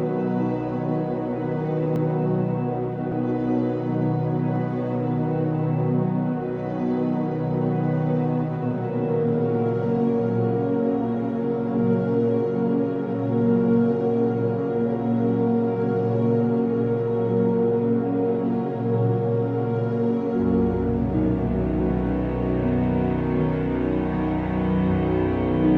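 At 1.96 s and again at 3.12 s the sound jumps, about 40 ms skipped each time, likely a dropped buffer (overrun). The waveform shows an abrupt splice with no gap, and the spectrogram a thin vertical broadband line.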